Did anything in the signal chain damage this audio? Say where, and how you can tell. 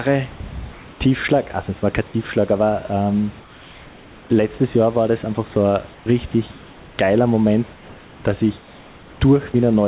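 Yes. The likely cause is discontinuous transmission in the call processing, with the receiver filling gaps with comfort noise in place of the background. At 0.72–1.0 s, 3.4–4.3 s, 5.92–6.06 s and 8.58–9.2 s, the room's textured hiss, about 26 dB below the loud speech, becomes flat, featureless noise about 1, 3, 4 and 3 dB quieter.

Sound was also dropped by the voice detector at 6.32 s, likely because it misread quiet sound as background and briefly stopped sending. About 10 ms of real sound vanishes into synthetic noise, a tiny notch in the band-limited call audio, which has nothing above 4 kHz.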